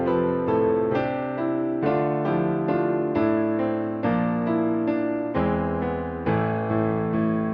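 No technical faults can be heard anywhere in this audio.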